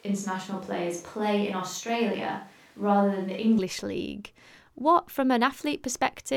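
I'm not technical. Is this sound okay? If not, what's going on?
No. From the start until 3.58 s the voice sounds roomy and hollow, thinner in the bass, then turns close and clear. Likely a switch to a distant microphone.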